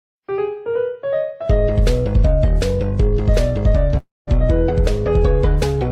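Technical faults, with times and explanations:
3.97 to 4.29 s, long network dropout: the stream likely stopped delivering audio for about 300 ms, and that stretch of the sound is gone for good. The receiver's concealment stretches the last good sound into a buzzy or hissy tail that fades over roughly 0.3 s, ending in about 190 ms of near silence. At 4.29 s the audio resumes further along, so the sound jumps forward past the lost section.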